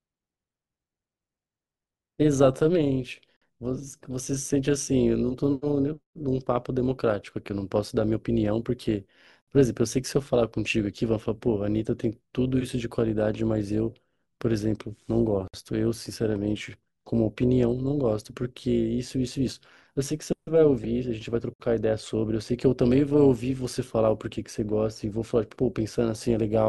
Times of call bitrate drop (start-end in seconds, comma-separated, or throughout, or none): none